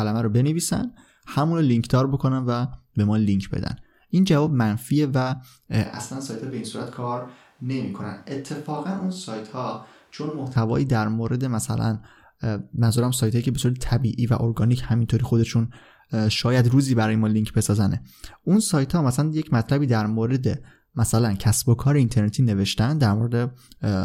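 The close microphone's feed likely dropped out from 5.85 to 10.56 s, leaving a switch to a distant microphone. The voice turns suddenly roomy and hollow, thinner in bass, about 10 dB quieter, with room noise rising to around 35 dB below the speech, then snaps back.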